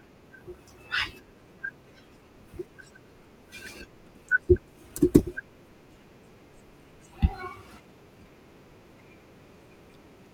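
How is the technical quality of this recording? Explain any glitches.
Two short glitches mar this speech recording, both of the same kind: a corrupt frame decoded. Flipped bits in the compressed stream went undetected, so the decoder used misread gains and codes and put energy at wrong frequencies. From 3.66 to 3.70 s a few consecutive frames were hit, giving a quiet chirp-like burst. At 5.19 s a single damaged frame produces a shorter but noticeably louder blip.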